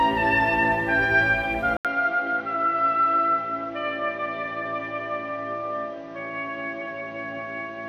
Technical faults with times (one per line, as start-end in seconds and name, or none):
1.77-7.89 input switched to a poorer device